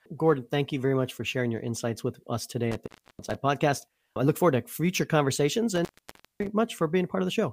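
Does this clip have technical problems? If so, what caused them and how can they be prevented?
Yes. The speech has two instances of intermittent contact, where a loose cable or plug briefly opens the signal path. The first runs from 2.72 to 3.35 s, just after "insights with us today" and before "podcast I look forward", with the line open for about 0.31 s. The second runs from 5.76 to 6.47 s, after "forward to future conversations", open for about 0.55 s. Each dropout is framed by crackle as the contact breaks and remakes. Reseating or replacing worn cables and connectors, and securing them against strain, prevents this.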